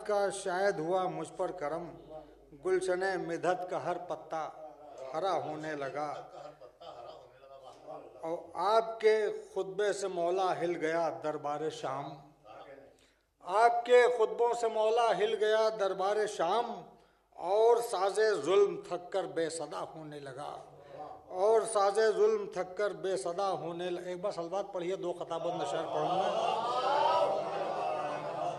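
No technical faults can be heard anywhere in the recording. The sound runs without any break, glitch or disturbance that would point to a problem in the chain.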